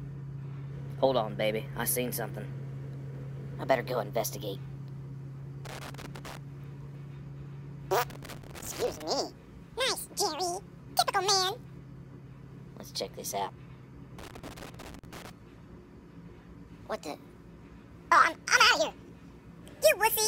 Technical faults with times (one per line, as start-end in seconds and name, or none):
5.65-6.37 loose connector crackle
8.10-9.02 loose connector crackle
14.18-15.30 loose connector crackle